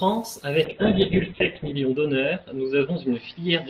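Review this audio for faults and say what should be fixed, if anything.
Call bitrate drop from 0.65 s to the end: the encoder's rate falls from 32 kbps to 7 kbps, bottoming out for about 1.07 s, and audio bandwidth narrows from 20 kHz to 4 kHz, so the speech turns muffled and coarse, losing its high-frequency detail. Prevent it by setting a higher minimum bitrate and improving network headroom so bandwidth estimates stay stable.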